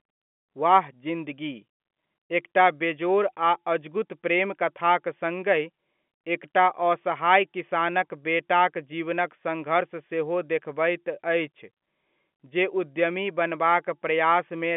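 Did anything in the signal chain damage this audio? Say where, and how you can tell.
No, the speech carries only the ordinary signature of G.711 telephone coding, with its energy confined to a 200 Hz to 3.4 kHz line band, nothing above about 3.7 kHz, and a faint grain that rises and falls with the level, which fits a 64 kbps mu-law path working as designed.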